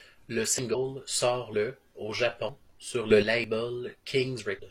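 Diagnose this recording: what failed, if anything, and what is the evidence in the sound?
The speech skips at 0.59, 1.54, 2.49, 3.44 and 4.39 s, each time losing about 50 ms with the two sides butted together. This is audio missing between chunks, likely at the driver or buffer stage dropping samples at each 1.0 s chunk handover. Its regular spacing distinguishes it from random dropouts.

At 0.70–0.75 s and 4.55–4.60 s there are short glitches. This is damaged data in a compressed stream at the codec or storage stage: the decoder misreads corrupt frames and resyncs.

From 3.10 to 3.22 s the speech and its background noise step up together by about 8 dB, then drop back. This is a sudden gain jump, likely a digital gain change in call processing applied without a ramp. Because the noise floor moves too, it cannot be a louder speaker.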